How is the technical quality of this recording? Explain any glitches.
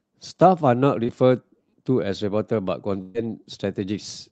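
The speech has two packet-loss glitches from a call connection, heard over an upper limit near 8 kHz that fits an Opus call codec at a moderate bitrate.

At 1.03–1.07 s there is a short concealed packet loss. About 20 ms of audio never arrived in time, and the decoder extended the preceding sound for roughly 17 ms before blending back into real audio. It is heard as a brief smear or wobble.

From 3.01 to 3.16 s a burst of packet loss removes about 140 ms of audio. The receiver stretched the last sound across roughly 131 ms while fading it down, with no full silence, producing a held buzz or fading hiss before speech resumes further on.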